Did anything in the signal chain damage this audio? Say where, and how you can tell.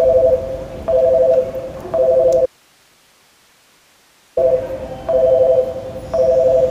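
Yes. From 2.46 s to 4.37 s there is an audio dropout to a faint residue: the signal cuts out abruptly for about 1.9 s and only hiss remains, roughly 35 dB below the normal level, before it returns just as suddenly. The cause is likely a momentary break upstream, such as an intermittent connection in the analogue wiring, while everything after the break stayed live. On a waveform the trace collapses to a thin noise band with sharp edges. A spectrogram shows a flat, even noise floor between hard vertical boundaries.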